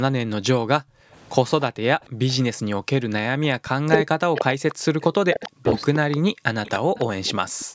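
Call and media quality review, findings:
Background gated by the echo canceller, four times: 0.81–1.13 s, 2.09–2.65 s, 6.29–6.44 s, 7.47–7.74 s. Room sound drops by about 40 dB, then snaps back. The AEC clamps the mic hard while the far end plays through the loudspeaker and releases once playback stops. Short ducks, each a few tenths of a second.

Speech suppressed in double talk, 3.28–5.67 s. The talker dips in and out, with deep drops, roughly 40 dB at worst. About a second and a half of speech is chewed up across that stretch. This is likely the AEC failing to tell near-end speech from loudspeaker echo while both sides talk, so it turns everything down.

Echo leak, a brief faint scrap at 3.65–3.69 s, then a sustained, much stronger copy from 4.36 s to 7.65 s. It's a delayed duplicate of the audio trailing by 302 ms, sitting roughly 15 to 25 dB under the direct speech. The likely cause is residual loudspeaker pickup that the far-end canceller didn't fully remove and sent back. 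The mic chain's band limit at 8 kHz is normal call processing, not part of this.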